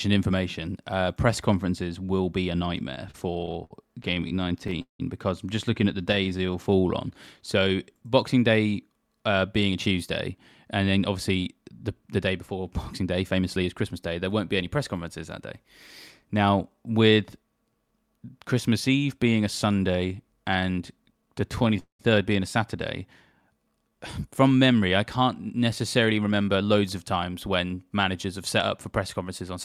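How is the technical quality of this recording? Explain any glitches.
The speech suffers from unsteady network delivery: it stalls in places and runs slightly slow or fast in others, all through the receiver's jitter buffer.

Repeated stalls (stutter) occur from 2.95 to 5.01 s, with 18 breaks covering 437 ms and the longest 178 ms; from 6.12 to 6.33 s, right after "just looking at the", with 4 tiny breaks of up to 11 ms; and from 21.56 to 22.01 s, with 3 breaks filling 217 ms, one of them 200 ms. Packets arrived late, the buffer ran dry, and the receiver kept the last sound going, fading it in the longer waits. Nothing is lost, but the speech halts and drags. Unlike a slow-down, it comes as distinct freezes rather than an even stretch.

Jitter buffer slow-down occurs from 6.02 to 7.76 s, after "just looking at the", at 93% speed with 126 ms added; from 21.03 to 21.78 s, just before "being a", at 94% with 54 ms added; and from 23.42 to 23.97 s at 85% with 88 ms added. 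To rebuild a reserve, the receiver repeated single pitch periods, so the speech drawls at unchanged pitch. This differs from tape-style slowing, which would lower the pitch.

Jitter buffer speed-up runs from 9.61 to 13.94 s at 106% and from 26.02 to 29.57 s at 107%, each trimming roughly a third of a second. The buffer held too much audio, so short pitch-period pieces were cut repeatedly. The speech sounds hurried while the pitch stays put, and nothing freezes or stutters.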